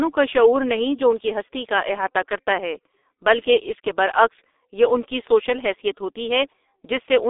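From start to finish the speech is squeezed through the G.723.1 codec. Everything above about 3.8 kHz is simply gone, and the heavy coding leaves it muffled and hoarse with smeared consonants, which fits a rate of roughly 6 kbit/s and 30 ms frames.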